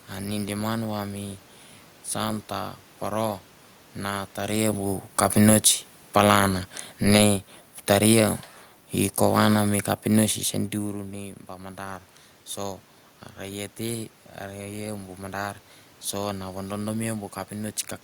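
A speech recording with two gain faults. After "poro na taria bu", from 5.18 to 10.44 s, automatic gain falling pulls the level down by about 5 dB, voice and room noise sinking together. From 11.03 to 17.8 s, automatic gain rising lifts everything by about 4 dB. It is compensating for a quieter input after the talker moves away around 10.5 s.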